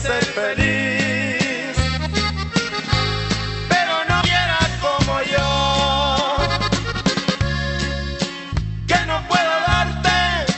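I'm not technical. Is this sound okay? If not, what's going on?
No. Around 4.21 to 4.23 s there is a skip ahead: about a second of sound never reached playback, either lost on the way or thrown out by the receiver's holding area (the jitter buffer) when it overflowed with later audio already waiting. Nothing fills the hole, so the sound before and after is stitched together almost directly, and you hear an abrupt jump forward.

From 6.18 to 7.38 s, and again from 8.30 to 8.81 s, there is a jitter buffer speed-up. The receiver had more audio stored than it wanted, so it trimmed many tiny slices out of the sound to catch up, removing about a fifth of a second in the first stretch and a much smaller amount in the second. The first passage runs about 20% fast and the second about 7% fast, with the pitch unchanged, so those moments sound rushed.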